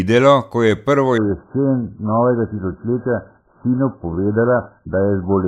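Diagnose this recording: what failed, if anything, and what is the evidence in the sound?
Adaptive stream at a lower bitrate, from 1.18 s, just after "ko je prvo", to the end: at the network stage the player abruptly switched renditions without a gap, and everything above 1.6 kHz vanishes with thickened codec artefacts, consistent with AAC falling from roughly 96 to 8 kbit/s.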